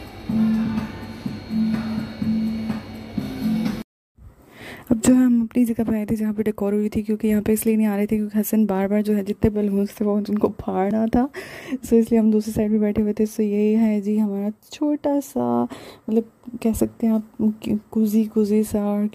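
Pre-emphasis left on from 3.21 s to the end: the treble lift follows the CD 50/15 µs curve, but the matching de-emphasis was never applied, leaving highs about 8 dB hotter at 10 kHz than at 1 kHz. The sound turns thin, bright and sibilant. A block of digital silence at 10.91 s drops the audio out for 1.45 ms, which fits a 64-sample block that went unfilled. The abrupt cut and return without any fade produce a tick or dip.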